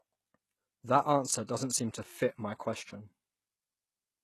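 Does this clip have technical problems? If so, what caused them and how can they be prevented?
Yes. The speech has a synthetic, gritty treble throughout, with nothing above 12.3 kHz. This is likely HE-AAC compression: the encoder kept only the lower spectrum and rebuilt the top by copying lower bands upward, so s sounds turn lispy and metallic. The damage is plainly audible and fits a very low bitrate of about 16 kbps. To prevent it, encode at a higher bitrate or use plain AAC or Opus.

There is also pre-echo from 1.47 to 1.49 s. The codec spread its quantisation noise across a whole block, so a short hiss of about 23 ms leaks in just before a sharp attack and softens its onset. To prevent it, use an encoder with proper block switching and give it enough bitrate to handle transients.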